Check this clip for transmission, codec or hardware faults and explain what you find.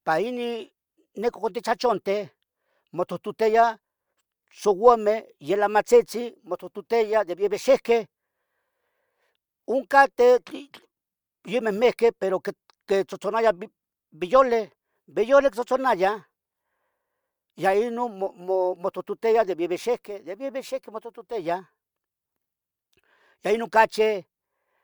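No fault can be heard anywhere in the path this speech took; the signal arrives whole and continuous, with nothing missing, broken or altered along the way.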